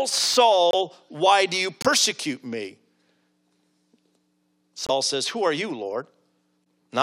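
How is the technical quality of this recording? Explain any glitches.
The speech recording has three short dropouts.

Corrupt frame muted at 0.71 to 0.75 s (just before "why do you"), 1.81 to 1.86 s (right after "why do you"), and 4.87 to 4.91 s: the decoder rejected damaged compressed frames and the player substituted silence. Each gap cuts in abruptly, lasting roughly one frame length, with the second long enough to suggest two, and the timing of the surrounding speech stays intact.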